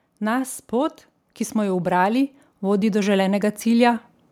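Right after "pot ki", at about 1.53 s, you get an automatic gain rising fault. The gain control decided the input was too quiet and started nudging its gain up, climbing by about 6 dB until around 4.0 s. Because it's the whole signal being turned up, the voice and the background noise swell together. It's a slow, steady lift over about two and a half seconds, not a sudden jump.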